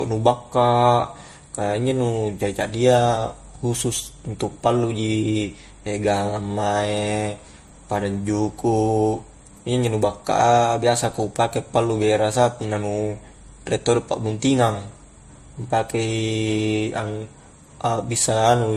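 Transcoding between lossy codecs runs throughout the clip. Nothing survives above 15.2 kHz, and two kinds of compression artefact sound together, which points to a low-bitrate MP3 likely re-encoded to AAC-LC. The second encoder spent bits on the first encoder's artefacts and added its own.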